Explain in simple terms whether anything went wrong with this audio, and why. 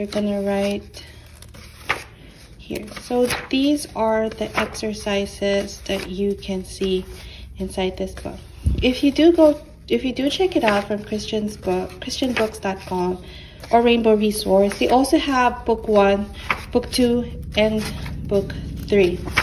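Nothing went wrong here.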